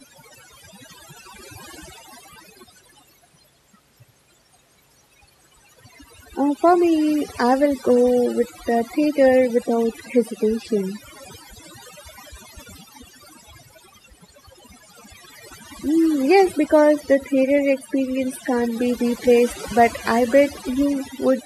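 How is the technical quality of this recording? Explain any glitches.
The recording is marred by one fault that runs through the whole clip. Overdone noise removal, from start to finish: a noise reduction stage set far too strong pulls individual frequency bands down or off whenever they sit near its noise estimate, taking the quieter parts of the speech with them. The background drops and breaks up into twinkling specks.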